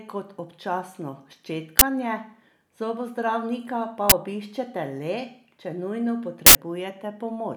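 Loud cracks hit at 1.79 and 4.10 s, and, after "če nujno", a burst of digital noise at 6.46 s: an uninitialised buffer, where leftover memory played as samples in blocks fitting 1024 and 4096 samples.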